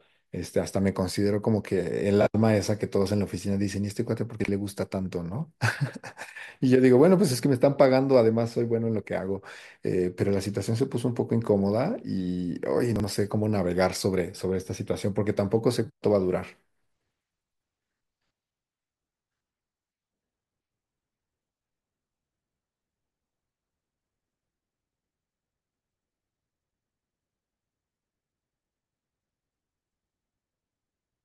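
A brief jumbled stutter breaks the speech at 4.4, 12.96 and 20.92 s, each lasting about 80 ms. These are chunks out of order: a 40 ms chunk played one chunk late, after the one that should follow it, leaving three hard joins at each spot.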